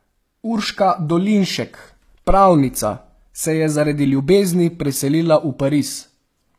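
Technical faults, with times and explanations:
Throughout: HE-AAC compression, or something very like it. The speech keeps its brightness, but the top end sounds synthetic, with s sounds coming out gritty and a bit lispy and a metallic sheen over the treble. That's the likely fingerprint of spectral band replication: only the lower band is really coded, and the highs are patched in from copies of it, so the upper harmonics don't line up. The damage is plainly audible, which fits a low bitrate around 24 kbps.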